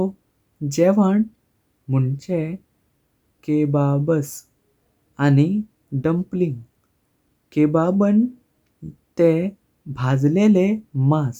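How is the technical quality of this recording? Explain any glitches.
No glitches or technical faults are audible anywhere in the speech recording.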